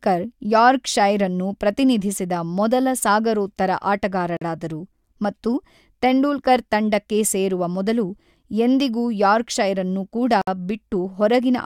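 At 4.37 s and at 10.42 s, just after "ನ್ನು ಕೂಡ", speech stops for about 46 ms and 59 ms. These are gaps at joins of encoded pieces, six seconds apart. Untrimmed encoder delay and padding leave smeared silences.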